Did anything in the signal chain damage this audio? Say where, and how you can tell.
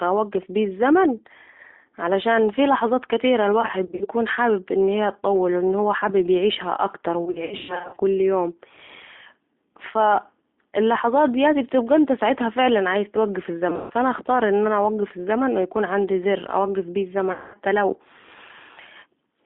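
Yes, two stages did. At the codec, the whole clip is G.729 (the G.729A variant) at 8 kbit/s, and the damage is plainly audible. The line band runs from about 250 Hz to 3.7 kHz, so the speech is thin, with no lows and no air on top. It also has that slightly rough, synthetic grain you get when speech is rebuilt from a vocal tract filter and a few pulses per frame, not carried as a waveform.

On the network side there are four patches of VoIP packet loss concealed by the speech codec. The first runs from 3.61 to 4.08 s, right after "علشان في لحظات كتيره" and before "حابب أن هي تطول": 180 ms lost, scattered in runs up to 60 ms. The second runs from 7.25 to 7.98 s, after "هو عايز يعيشها اكتر": 380 ms lost, with runs up to 120 ms. The third, from 13.70 to 13.92 s, is 160 ms lost, mostly in one 140 ms run. The fourth, from 17.32 to 17.58 s, after "عندي زر اوقف بيه", is 220 ms. In each gap the decoder stretches the last pitch and filter into a buzzy tone or a coloured noise that fades. 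Because every frame builds on the previous one, the sound stays weak and smeared for a moment after packets start arriving again.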